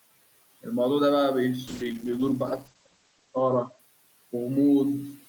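Call bitrate drop, 1.69 to 3.85 s: starved of bits, the encoder codes coarsely and cuts everything above 8 kHz, so speech turns rough and muffled.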